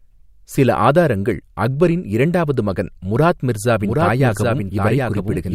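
At 3.80 s a doubled audio track begins and lasts to the end. A full-band copy of the speech trails by roughly 0.7 s, about 5 dB quieter. It cuts in abruptly, dry and without decay. A slower second capture path or misaligned edit is the likely cause.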